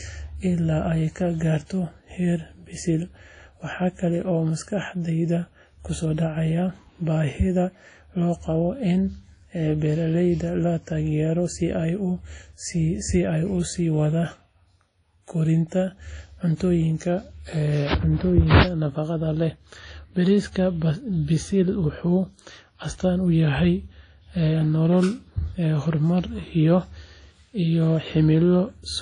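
Speech with plainly audible WMA compression throughout: a washy, ringing hiss breathing with the signal, nothing above 10.1 kHz, likely from an encode around 32 kbps.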